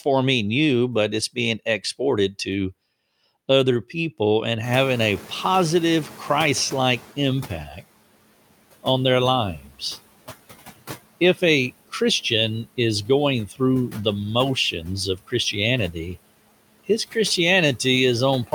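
Throughout the recording, the noise suppressor cuts every band it judges to be steady noise by about 17 dB, frame by frame. Its decisions keep shifting with the speech, so the residual background sinks in the gaps and swells back under the talker. The noise suppressor artifacts are audible as this rising and sinking of the remaining background.

Around four and a half seconds, the room noise jumps by about 24 dB and settles about 19 dB below the speech. From 4.63 to 7.62 s, the noise suppressor is catching up: its noise estimate still reflects the quieter room, so it reduces the louder background by only about 11 dB. The noise comes through stronger at first, then gradually sinks over roughly three seconds until the estimate matches the new level.

At 9.6 to 9.81 s and again at 13.48 to 13.6 s, there is speech cut by the noise suppressor. It mistakes low-level parts of the speech for background and turns them down along with the noise, by up to about 9 dB in the first case and about 11 dB in the second. 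Each time, roughly a tenth of a second of speech is affected, and the dimmed sounds come across as swallowed or faint.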